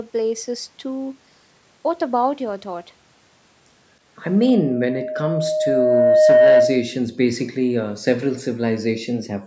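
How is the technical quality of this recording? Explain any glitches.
The recording has three faults, all from about 4.2 s onward.

A loudspeaker feedback squeal runs from 4.24 to 6.96 s. A microphone is hearing the loudspeaker it feeds. At 619 Hz the loop gain passes unity. That tone swells over roughly two seconds into a steady squeal, well above the speech.

From 4.47 to 4.52 s there is a very faint, delayed copy of the speech, 312 ms behind the original. It is likely an echo leak. The far end's echo canceller let some loudspeaker sound back through its microphone.

The background gated by the echo canceller appears seven times: 4.64 to 4.81, 5.81 to 6.14, 7.09 to 7.34, 7.57 to 7.80, 8.56 to 8.75, 8.91 to 9.16, and 9.34 s to the end. Each time, the canceller cut the microphone by up to about 40 dB while the loudspeaker played. The room tone drops out briefly, then returns.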